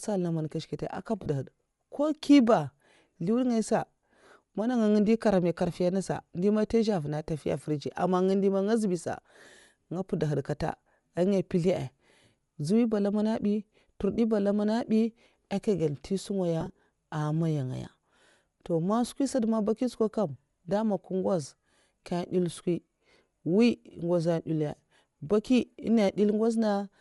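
Throughout the speech there is a breathy, grainy edge, with the upper spectrum sounding noise-filled rather than clean. This is likely Bluetooth LC3 compression: the transform codec zeroes high bands and fills them with noise. The plainly audible damage fits roughly 48 kbps with 10 ms frames.

Lost LE Audio frames occur at 1.23–1.26 s (30 ms), 14.14–14.18 s (40 ms, just before "ba lamana bi aka"), and 16.61–16.75 s, where brief gaps of about 10 ms are scattered over 140 ms before "amaya ngaya". The decoder reuses the last spectrum with random signs, so these spots are filled in rather than left as a hard silent gap or click.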